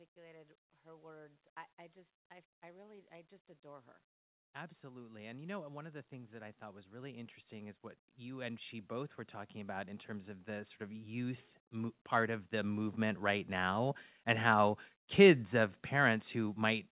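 Automatic gain rising in a speech clip: the gain control judged the input too quiet and kept pushing its gain up from 2.61 s, after "I I just I", until 14.01 s, before "and how kids of", by about 21 dB. Voice and background swell together, over the call path's narrow band ending near 4 kHz.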